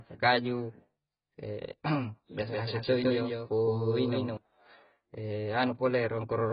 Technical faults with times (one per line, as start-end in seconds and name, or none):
0.00-6.53 AAC compression
2.47-4.37 doubled audio track